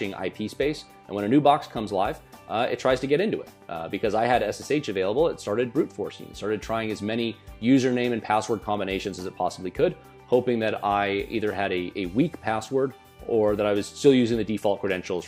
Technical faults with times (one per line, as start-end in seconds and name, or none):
7.53 DAB burbling